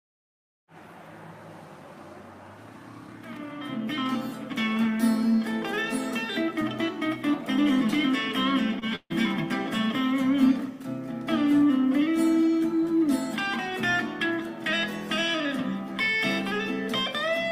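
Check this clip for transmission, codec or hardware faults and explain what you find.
Two transmission faults occur close together, both from packets failing to arrive in time.

Short concealed packet loss, 8.79 to 8.83 s: about 20 ms never reached the decoder, so the receiver extended the preceding sound, leaving a brief smear or wobble.

Burst of packet loss, 8.95 to 9.12 s: roughly 140 ms went missing; concealment filled about 146 ms with fading continuation, including about 40 ms of silence, before audio resumes further on.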